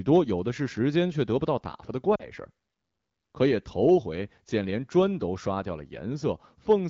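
From 2.15 to 2.30 s the speech briefly dips toward near silence before recovering. These are lost AMR speech frames, consistent with about 40 ms of missing wideband audio, which the decoder bridged by repeating earlier parameters with falling gain.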